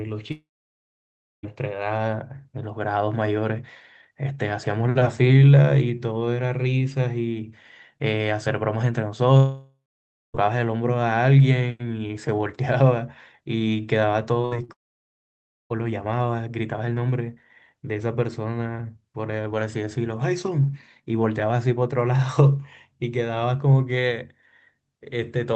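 Long network dropout, 0.31 to 1.45 s: the sound stretches into a brief fading buzz and then drops to silence for about 0.99 s, with about 1.12 s of audio never returning. A long gap in arriving packets is the likely cause, and the receiver can only extend the last sound so far before giving up. The same pattern recurs at 9.37 to 10.36 s (0.98 s lost, 0.56 s of silence) and at 14.72 to 15.72 s (0.98 s lost, 0.95 s silent).

Short concealed packet loss, 14.42 to 14.55 s: 20 ms of audio missed the decoder and was replaced by a 17 ms continuation of the preceding sound, blended back in and heard as a small smear. A second one follows at 14.64 to 14.70 s, where 40 ms went missing and 44 ms of synthesized fill stands in, giving a brief wobble.

Burst of packet loss, 14.45 to 14.53 s, inside that first concealment: 60 ms in a row failed to arrive, so the receiver held the last sound for 57 ms while turning it down. 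This produces a fading buzz or hiss before the audio resumes past the missing section. This cluster of losses leads directly into the third dropout. Throughout, the call codec's high-frequency ceiling near 8 kHz is audible, which fits Opus at a modest bitrate.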